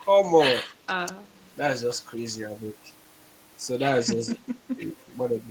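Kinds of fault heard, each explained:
Speech suppressed in double talk: The speech dips by about 10 dB from 4.10 to 4.53 s and from 4.75 to 4.99 s. This is likely an echo canceller ducking during overlapping talk.
Echo leak: A faint delayed copy arrives 212 ms late, from 4.98 to 5.04 s, about 35 dB below the speech. Likely residual loudspeaker echo.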